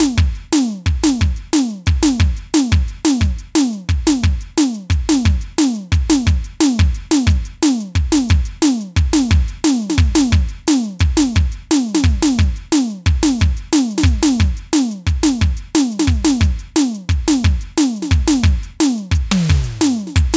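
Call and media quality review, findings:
Gain pumping, throughout the music. Background swells between loud hits, ducks around 5 dB under each. Dynamics squashed. Likely input gain set far too high, with a fast limiter clamping every peak. Call mic path band-limited to 8 kHz, as expected.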